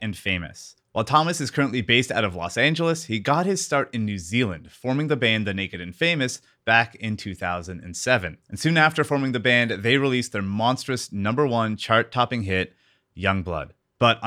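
No audible technical faults anywhere in this speech recording.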